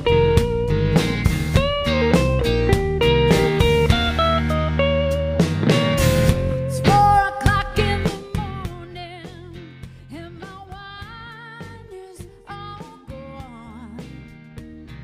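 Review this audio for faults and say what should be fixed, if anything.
Zipper noise from 7.77 to 9.31 s: the level drops by about 20 dB in 2 dB jumps, roughly ten a second, and each jump leaves a little tick. Interpolating the gain per sample instead of stepping it should smooth that out.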